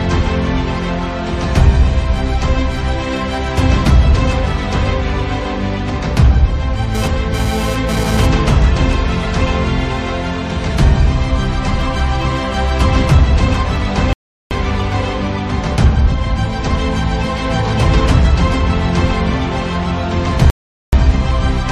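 From 6.95 to 8.26 s a GSM phone buzz sits about 9 dB below the audio: a hard, raspy 217 Hz tone that comes and goes, as a nearby 2G phone transferring data pulses its transmitter and the audio circuitry rectifies those bursts. On a spectrogram it shows as evenly stacked horizontal harmonic lines of 217 Hz. Two rebuffering stalls follow, at 14.13 to 14.51 s (0.38 s) and 20.50 to 20.93 s (0.43 s), where playback runs dry, drops to silence, then resumes exactly where it stopped. Each shows as a flat gap in the waveform and a blank column in the spectrogram.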